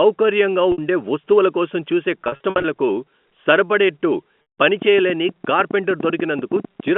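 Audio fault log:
0.72 to 0.78 s, 2.24 to 2.64 s and 4.42 to 4.58 s: packet loss with pitch repetition. The first is a 60 ms gap just before "ఉండే వస్తువుల కోసం చూసే", heard as a brief buzzy hold where the last pitch cycle gets looped. Right after "ఉండే వస్తువుల కోసం చూసే" comes a patchy 400 ms stretch, about 220 ms missing, and then a 160 ms drop that fades out under the concealment before the speech cross-fades back in.
4.82 to 6.89 s: train of clicks. About 20 sharp ticks land at an average of roughly 9 per second, unevenly spaced, and they peak around 10 dB above the speech, so they poke through in the pauses too. Likely interference or a struggling interface injecting pulses.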